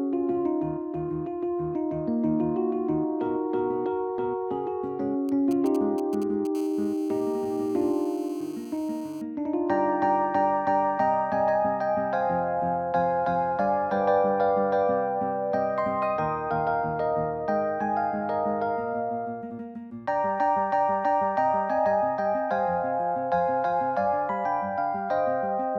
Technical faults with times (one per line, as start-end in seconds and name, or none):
5.29-6.47 GSM signalling bursts
6.55-9.22 GSM phone buzz